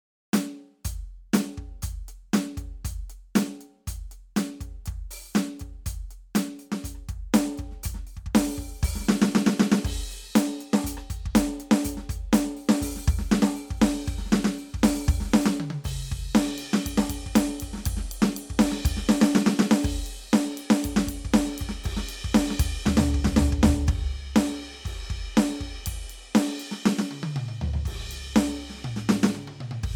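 No technical faults are audible anywhere in the music.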